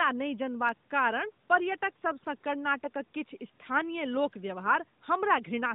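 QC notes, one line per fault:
No faults to note.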